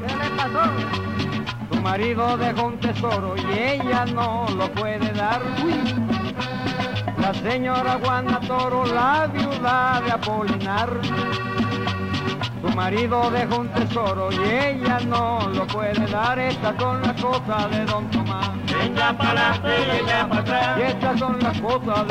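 No technical faults are audible.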